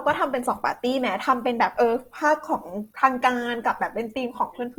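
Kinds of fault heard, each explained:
Opus compression: The speech sounds rough and grainy for the whole clip, with a noisy, sandy texture over its tonal parts and plainly audible damage. The bandwidth stays full, with content up to about 20.2 kHz, so it is not muffled. The likely cause is Opus in its CELT music mode at a low rate, one that fits about 24 kbps. The encoder keeps each band's energy but refills starved bands with folded or noise content, which produces grain instead of holes.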